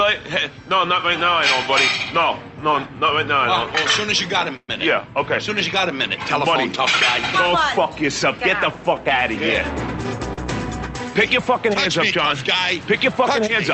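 A call audio freeze at 4.56–4.69 s is most likely packets held up in transit, emptying the jitter buffer: the last sound is extended as a fading buzz, with about 40 ms of silence, then resumes where it stopped. A short stall from a late packet at 10.33–10.38 s holds a sound roughly 41 ms too long, with a slight buzz, before continuing unchanged. Both stalls insert a gap, leaving nothing missing, in audio that has passed through a call codec whose high end stops near 8 kHz, consistent with Opus at around 32 kbps.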